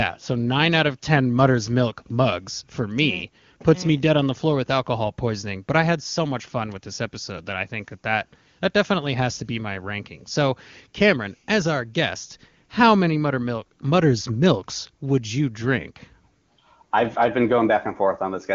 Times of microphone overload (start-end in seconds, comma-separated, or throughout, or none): none